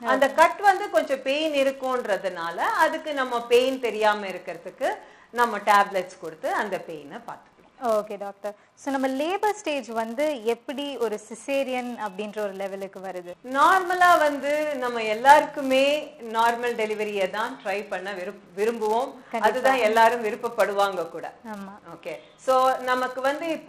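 From start to finish the audio carries a buzz at 200 Hz, the sign of a filter restarted on every block. The filter discards its memory at each block boundary and begins again from silence, so every 5 ms block opens with a small transient, and those ticks fuse into a tone. Unlike mains hum, which stays steady underneath, this buzz rises and falls with the level of the sound and fades when it goes quiet.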